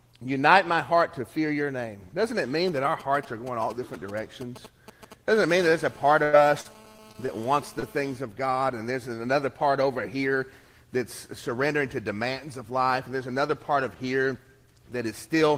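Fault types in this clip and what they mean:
GSM signalling bursts: From 2.68 to 5.61 s a galloping dit-dit-dit of short buzzes sits roughly 15 dB below the sound. A nearby 2G phone is sending brief groups of radio bursts at 216.7 Hz, which the audio circuit rectifies into short buzzes.
GSM phone buzz: From 5.62 to 8.17 s a hard, raspy, harmonic-rich buzz at 216.7 Hz runs steadily, about 24 dB below the sound and unrelated to it. A nearby 2G phone in a call transmits continuously in bursts, and the audio circuit rectifies those radio pulses.
Repeated packet loss (robotic sound): Between 6.23 and 7.30 s the sound turns choppy and robotic, with six gaps, the longest 94 ms, and about 19% of that stretch patched. Packets kept arriving late or not at all, and each hole was filled by extending the last sound.
Short concealed packet loss: At 7.80 s a brief smear or wobble lasting about 28 ms replaces 20 ms of audio that never reached the decoder in time. 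The receiver bridged the hole by continuing the preceding sound, then blended back into the real signal.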